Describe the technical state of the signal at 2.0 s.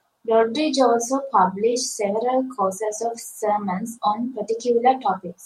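At 2.0 s the speech signal is intact, with no audible fault at that moment.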